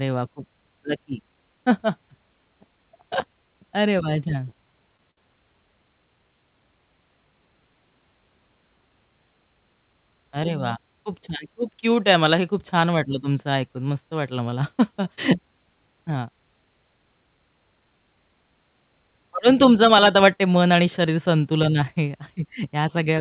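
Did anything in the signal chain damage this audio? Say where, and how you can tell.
Yes. Short stalls from late packets, at the network and jitter buffer stage, occur at 4.97, 5.11 and 14.50 s. The buffer ran dry and stretched the last sound by 19, 62 and 16 ms, so it is held, not lost. A spectrogram shows flattened, smeared harmonics, and the waveform shows repeated cycles. The 4 kHz band limit fits the G.711 call codec.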